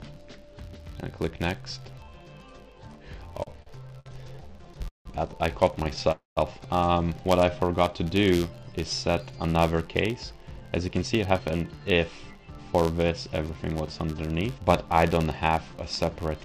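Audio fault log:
Throughout: filter restarted on every block. A filter loses its memory at each block boundary and starts again from silence, so each block opens with a small click. These repeat as an 86.1 Hz buzz, which fits a 512-sample buffer. The buzz rises and falls with the level of the sound.
3.43 to 5.07 s: repeated stalls (stutter). Packets kept arriving too slowly, and the jitter buffer ran dry again and again. Each time the receiver stretched the last sound to cover the wait. About 413 ms was filled this way, roughly a quarter of the span. The longest wait was 170 ms. Nothing is lost, but the sound drags and stutters.
6.12 to 6.39 s: call audio freeze. The sound stops moving forward for 251 ms. The last sound is held and fades, then about 160 ms of silence follows. The likely cause is packets held up in transit, which emptied the jitter buffer. Playback then resumes where it stopped, 251 ms later.
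9.33 to 12.53 s: jitter buffer speed-up. The buffer held more audio than it should. To shrink the delay, the receiver cut many short pitch-period slices, around 0.4 s in total. The sound runs at 111% speed with unchanged pitch and feels hurried.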